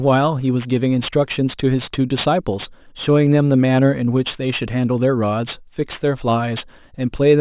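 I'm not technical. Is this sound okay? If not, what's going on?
No. There's aliasing throughout this speech. It sounds gritty and a bit metallic, most of all on hissy sounds like s and sh. The audio seems to have been squeezed down to a much lower quality setting, likely something like 8 kHz. Nothing removed the high sounds first. Anything above about 4 kHz could not fit, so it folded back down as false, unrelated tones. Those tones are the harsh edge you hear.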